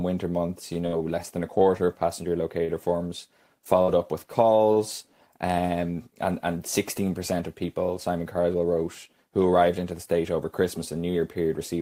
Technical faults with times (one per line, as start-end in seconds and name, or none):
0.73-1.82 repeated packet loss (robotic sound)
2.64-2.71 short stall from a late packet
3.82-3.99 burst of packet loss